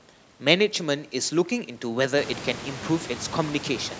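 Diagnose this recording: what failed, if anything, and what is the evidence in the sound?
Nothing failed here: the speech has gone through ordinary call microphone processing, with nothing above 8 kHz, and the room noise that swells by about 19 dB around the two-second mark is just the room itself, still sitting about 16 dB below the speech.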